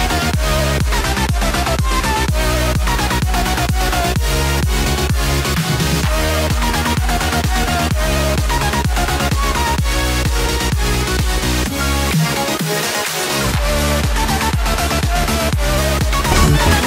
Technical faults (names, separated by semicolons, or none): drift correction step